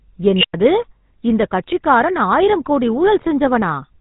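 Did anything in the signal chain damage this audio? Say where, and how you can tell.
Yes. The damage is at the codec stage. Throughout the speech there is the plainly audible buzzy, gravelly roughness of the GSM full-rate codec, with nothing above 3.8 kHz. The voice is rebuilt from a vocal-tract model driven by coarse, regularly spaced pulses, which fits 13 kbps full-rate coding.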